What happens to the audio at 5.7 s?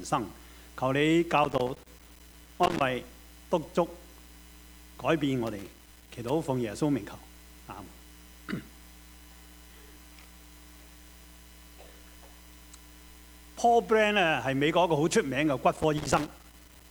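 At 5.7 s the audio falls inside a burst of loose connector crackle running from about 5.47 to 6.30 s. A worn or dirty contact is intermittently making and breaking, chopping the signal and adding pops from any DC present, which gives an irregular scratching crackle.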